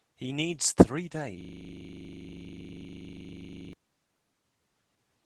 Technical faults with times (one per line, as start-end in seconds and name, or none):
0.00-5.25 Opus voice compression
1.41-3.73 system hang loop